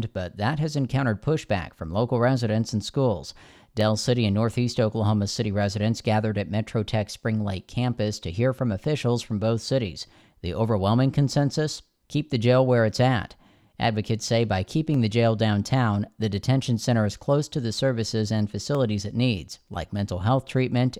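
Dropped samples at 3.81 s after "local residents and schools", 14.94 s between "say by" and "the jail downtown the", and 18.75 s between "to the services and" and "it needs like": each is a single sharp click, likely from a fraction of a millisecond of missing samples making the waveform jump.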